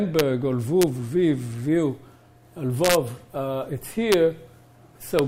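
Sharp cracks of integer overflow hit the loudest peaks at 0.19 s, 0.82 s, 2.85 to 2.95 s, 4.12 s and 5.19 s. Each time the signal pushed only about 1 dB past full scale (about 0 dB at 0.82 s), but instead of being held at the limit it wrapped round to the opposite extreme. On the waveform, peaks jump abruptly from top to bottom; the spectrogram shows bright vertical broadband streaks, each far harsher than ordinary clipping.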